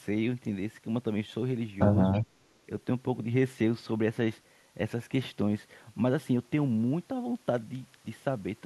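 From 2.12 to 2.2 s, an echo leak: a faint speech copy about 318 ms late, roughly 25 dB down, visible as a weak repeated spectrogram trace, likely from an echo canceller letting loudspeaker sound through.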